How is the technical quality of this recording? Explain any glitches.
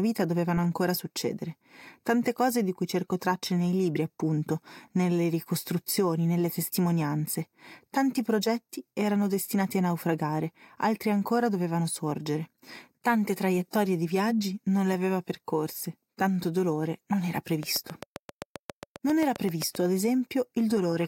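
There's one real problem, a train of clicks near the end of the speech, running from 17.63 to 19.76 s. The clicks are evenly spaced at about 7.5 per second, around fifteen of them, and peak roughly 10 dB above the speech. They all have much the same shape and keep ticking through pauses as well as over the talking. That regular, repeated pulse is most likely interference from nearby gear or a faulty connection or power supply.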